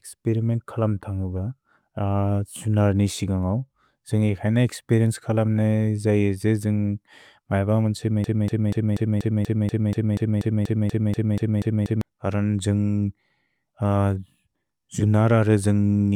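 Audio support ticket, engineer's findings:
Broken-record loop, 8.24 to 12.01 s. A 0.24 s chunk of speech repeats exactly, back to back, 16 times, then normal playback resumes. Likely the player or stream stalled and kept replaying the last fragment in its buffer. Whatever should have played in those 3.8 s is gone, so check the buffer handling first.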